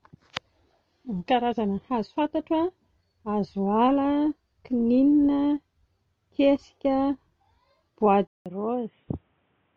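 At 8.27 s the recording's input likely switched to a poorer device, with a gap of about 0.19 s at the changeover. From there to the end at about 9.8 s, the speech comes through a narrower path with nothing above 3.8 kHz, so it turns dull and boxy. It also drops a few decibels in level and carries a faint new background noise well below the speech.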